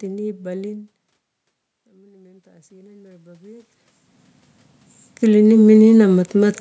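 Automatic gain rising, from 1.87 to 3.77 s and again from 5.2 to 6.35 s, makes this speech and the room noise behind it swell together. After the input fell by about 22 dB, the gain control gradually boosted by about 10 dB, then by about 6 dB.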